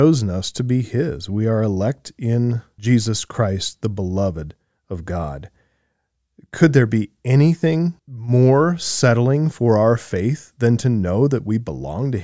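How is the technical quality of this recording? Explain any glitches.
No glitches can be heard anywhere in the recording. There is nothing here that needs explaining.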